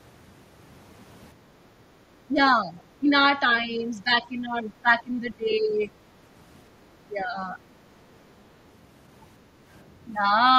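Speech recording with two echo-canceller faults. From 1.34 to 1.99 s the background is gated by the echo canceller. The room sound drops by about 7 dB while loudspeaker playback is active, then returns. The speech then dips in pieces at 2.28–2.4, 2.57–2.78, 3.0–3.08, 3.64–5.69 and 7.07–7.59 s. Drops reach roughly 10 dB, and around 15 dB in the long stretch. The likely cause is speech suppressed in double talk, with the canceller treating the local voice as echo.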